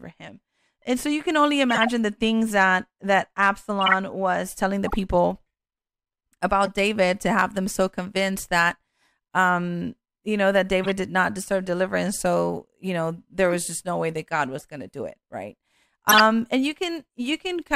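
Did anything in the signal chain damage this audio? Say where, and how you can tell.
Yes, the codec stage. There are eight corrupt frames decoded in this speech, at 1.69–1.89, 3.81–3.92, 4.86–4.94, 6.63–6.68, 10.84–10.86, 13.50–13.55, 14.59–14.65 and 16.09–16.20 s. Each is a short squeak or noise burst, the loudest peaking around -5 dBFS, where damaged bits misplaced energy across a few frames.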